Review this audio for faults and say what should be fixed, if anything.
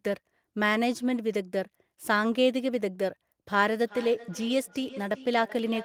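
Feedback echo between two devices appears from 3.85 s to the end. The speech returns about every 0.4 s at about −17 dB, thinner and ringing. Unlike room reverberation, which decays smoothly, these repeats arrive at a fixed interval because a second device replays the sound and the first microphone picks it up again. To prevent it, mute or disconnect one of the two co-located devices, or use headphones on one of them.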